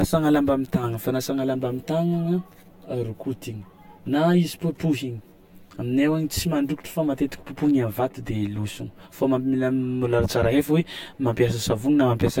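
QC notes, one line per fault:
throughout: channel delay (comb filtering), a lag of around 10 ms cancels evenly spaced frequencies from about 50 Hz when summed; hollow, with fixed notches, unlike flanging.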